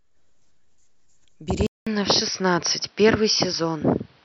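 A speech recording where the input likely switched to a poorer device at 1.67 s: after a 0.2 s silence, nothing above 5.8 kHz survives, the level shifts by about 5 dB, and faint new background noise persists to the end.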